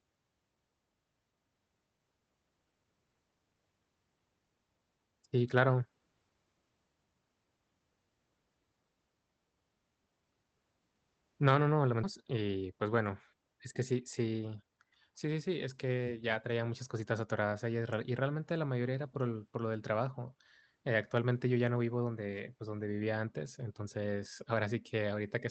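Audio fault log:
12.03 s, skip ahead: right after "no no", playback leaps forward past about a second of audio with no gap and no filler. The two sides are butted together almost directly, so unlike loss concealment nothing smeared or synthetic covers the hole; sound is simply missing.
12.23–13.50 s and 14.00–14.92 s, jitter buffer speed-up: the stretch ending at "es que" runs at 109 % speed, and the stretch from "es que" to "sí sí sí es" runs at 113 %. Each trims roughly 150 ms by cutting many pitch-period slivers, so it sounds hurried at unchanged pitch rather than jumping like the skip.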